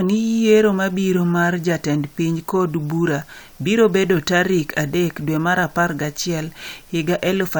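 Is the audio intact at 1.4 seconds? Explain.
Yes, the speech at 1.4 seconds plays through intact, with no dropout, click, glitch or other fault at that moment.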